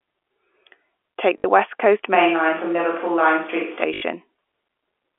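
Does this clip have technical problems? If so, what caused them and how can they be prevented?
Yes. Packet loss with last packet repeated: the receiver lost audio packets and replayed the last one, causing robotic stutters at 1.38–1.44 s (60 ms) and 3.94–4.02 s (80 ms), which fits three and four lost 20 ms packets. Prevent it with a more reliable network path and packet-loss concealment that fades or interpolates rather than repeating.

A switch to a distant microphone likely happened from 2.15 to 3.83 s. The speech turns roomy and hollow with thinner bass, at roughly the same level, and room noise rises to about 30 dB below the speech. Prevent it by securing the close microphone's connection and confirming it stays selected as the active source.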